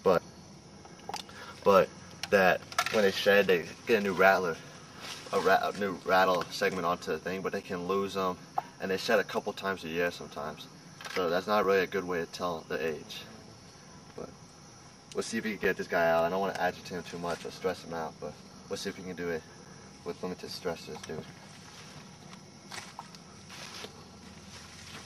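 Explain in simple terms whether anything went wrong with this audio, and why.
Short holes cut into the sound at 3.62, 7.63, 11.64, 15.64, 19.65 and 23.66 seconds. Each lasts about 7 ms and arrives every 4 seconds. This is a gap between chunks. The audio was handled in pieces, and silence crept in at each join.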